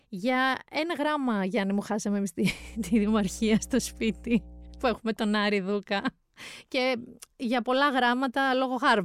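From 2.56 s to 4.98 s a steady low drone sits under the speech, a constant 60 Hz tone with some low harmonics above it, well below the speech at about 20 dB down. This is mains hum: the power line's alternating current has leaked into the signal path, through a ground loop between connected equipment or by induction from a nearby transformer.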